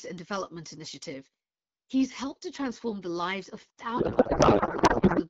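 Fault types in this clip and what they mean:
Pre-emphasis left on: From the start to 2.52 s the treble is lifted by about 8 dB at 10 kHz relative to 1 kHz, a tilt that matches the CD 50/15 µs emphasis curve. The matching de-emphasis cut was never applied on playback, so the high-frequency boost stays in the signal. Through this stretch the speech sounds thin, bright and hissy, with sibilants pushed forward and too little body in the lower range.
Codec payload misread: Between 3.97 and 5.22 s the receiver unpacks the AMR frames using the wrong bit layout, which fits octet-aligned payloads being read as bandwidth-efficient. Every field lands in the wrong position, yet the frames still look valid and decode without errors. Instead of speech, that section carries garbled noise and warble that barely follows the original until the segment ends.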